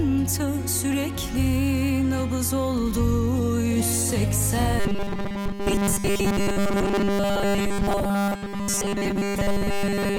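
From 4.80 s right through to the end at 10.19 s, you get robotic sound from repeated short buffers. A fixed 200 Hz metallic buzz sets in, since essentially every slice is a repeat, likely a 5 ms buffer looped while fresh audio failed to arrive in time.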